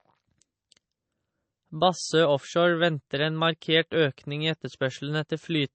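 A speech recording carries audible coding damage for its whole length, with nothing above 8.3 kHz and a watery, swirling texture on the sibilants that points to MP3 compression, likely at a low bitrate around 32 kbps. Starved of bits, the encoder cuts the treble at a fixed point and drops weak frequency lines that flicker on and off between frames. That flicker is what separates it from a plain low-pass filter, which would dull the top but leave no swirl.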